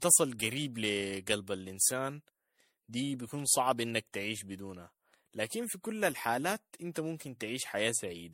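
Speech, with generation loss running through the whole clip. It sounds swirly, smeared and hollow, and consonant attacks blur. Nothing is present above 16.5 kHz. The likely cause is about five rounds of MP3 re-encoding, each adding fresh quantisation noise, at settings that fit 64 kbit/s.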